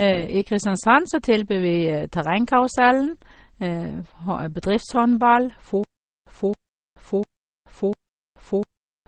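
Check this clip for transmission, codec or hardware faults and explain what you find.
Two faults are audible: a chain of lossy codecs affecting the whole speech clip, and a stutter with silent gaps over the final seconds.

Transcoding between lossy codecs runs throughout. The speech was likely encoded at a low bitrate by one codec, such as MP3, and then re-encoded by another, such as Opus. The second pass spent bits on the first codec's artefacts and added its own, so both sets of smearing are heard together. Nothing remains above 9.5 kHz.

The stutter with silent gaps starts at 5.84 s and lasts to the end. The stream likely stalled, and at each retry it replayed the last fragment before running empty. A 0.27 s burst returns four times, every 0.70 s, with 0.43 s of digital silence between repeats. The speech that should have filled that time is lost.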